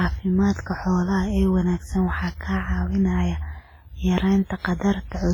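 Speech, and the whole clip has a washy, ringing quality with a hiss that swells and fades as the talking does, and quiet detail between louder sounds seems to drop out altogether. That smeared, breathing texture most likely comes from WMA compression. Long transform blocks spread quantisation noise over tens of milliseconds, and a starved bit budget zeroes the weaker components. How heavy the damage is fits an early WMA encoder at roughly 24 kbps.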